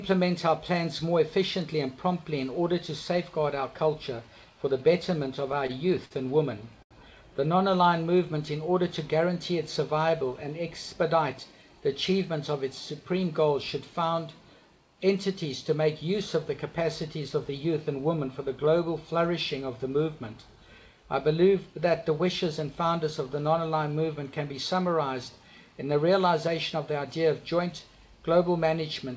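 Repeated stalls (stutter) occur from 5.52 to 6.93 s in this audio, which passes through a call path with nothing above 8 kHz, consistent with a wideband G.722 link. Packets arrived late, so the jitter buffer emptied four times. The receiver stretched the last sound across about 162 ms, up to 80 ms at once, giving a dragging stutter without losing content. Jitter buffer speed-up follows at 10.13 to 11.15 s and again at 26.08 to 26.91 s. With excess audio queued, the receiver clipped out brief pitch-period slices, about 50 ms and then about 40 ms, so playback runs at 104% speed, faster but at unchanged pitch.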